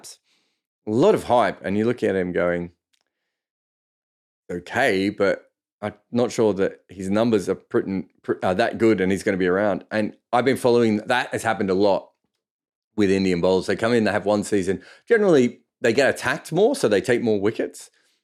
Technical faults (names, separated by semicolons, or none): none